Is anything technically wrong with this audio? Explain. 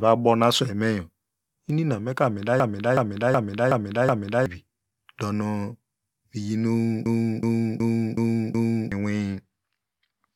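Yes. A system hang loop occurs from 2.60 to 4.46 s and from 7.06 to 8.92 s. The driver froze, so the hardware replayed one 0.37 s buffer (fitting a 16384-sample ring) five times. The result is a stutter at about 2.7 Hz that replaces about two seconds of speech each time.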